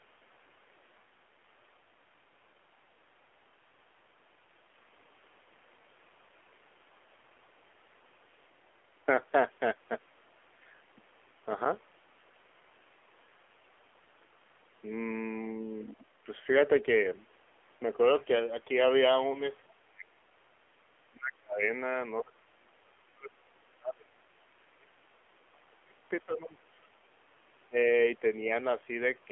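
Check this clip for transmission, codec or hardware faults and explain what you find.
Three faults are audible: narrowband mobile codec coding throughout, one lost speech frame, and repeated dropouts consistent with double-talk suppression.

The AMR narrowband mobile codec affects the whole clip. The speech is confined to roughly 300 Hz to 3.4 kHz, with plainly audible buzzy, synthetic coding damage. That degree of damage suggests a low AMR-NB mode around 7.4 kbps, where few pulses per subframe are available to drive the vocal-tract model.

Lost AMR speech frames occur at 19.32–19.43 s. The decoder repeats the previous pitch and vocal-tract parameters at reduced gain, producing a brief dip or warble before the voice comes back weak or rough for a moment. The event's short length fits a single missing 20 ms frame.

Speech suppressed in double talk appears at 15.85–16.07, 19.77–20.24, 21.09–21.63, 22.22–24.94, 25.51–26.00, 26.25–26.99 and 27.69–27.77 s. 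The talker's level drops by roughly 15 to 35 dB. This is likely an echo canceller attenuating the near talker while the far side speaks.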